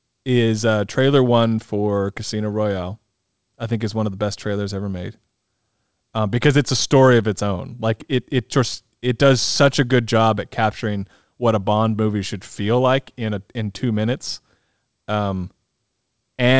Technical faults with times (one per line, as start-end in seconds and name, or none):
none